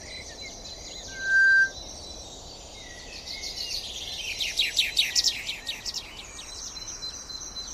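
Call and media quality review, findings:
Loudspeaker feedback squeal, 1.08–1.74 s. Mic picking up its own loudspeaker; loop gain above unity at 1.6 kHz. Single tone swells over roughly a third of a second to about 15 dB above the sound, then stops.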